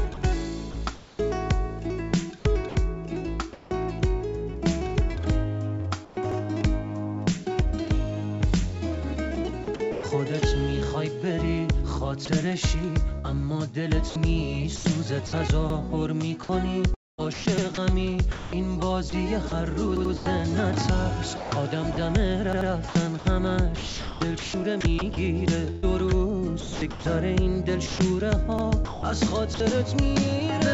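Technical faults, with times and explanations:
0.14 to 1.19 s, 9.64 to 10.03 s and 12.25 to 29.60 s, sound chopped by the voice detector: the audio keeps cutting in and out, with quieter stretches and edges swapped for a flat synthetic hiss. About 0.3 s is replaced in the first stretch, about 0.18 s in the second, and close to 3 s in total across the long third. The likely cause is a sending voice detector toggling repeatedly. Unlike a single dropout, the sound has several holes rather than one.
2.69 s, sound dropped by the voice detector: 60 ms of sound simply disappears and steady noise takes its place until the signal resumes. The likely cause is a voice detector judging a soft moment to be background and halting transmission, with the receiver filling in. It differs from the chopping above because it is one clean gap rather than repeated switching, and the lost sound is not repeated or smeared.
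2.69 to 3.71 s and 6.05 to 6.17 s, comfort noise in place of the background: in the pauses, the natural background gives way to a smooth, featureless hiss. Around 240 ms is affected in the first pause and 120 ms in the second. In the second pause the background, which sits about 22 dB below the loud parts, drops by about 4 dB. This is likely discontinuous transmission, with the receiver generating approximate noise. No wanted sound is cut, which separates it from the voice-detector dropouts.
6.32, 15.70, 17.58, 19.97, 22.53 and 28.59 s, repeated buffer: each time, a slice of about 85 ms plays again immediately with a hard join, heard as a short stutter rather than a gap. At 19.97 and 22.53 s the slice repeats twice, so the stutter is longer. The slice length fits a 4096-sample playback buffer that was replayed because fresh audio arrived late. Unlike comfort noise, the repeated material is the real sound, duplicated exactly. 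The call codec passes nothing above 8 kHz throughout.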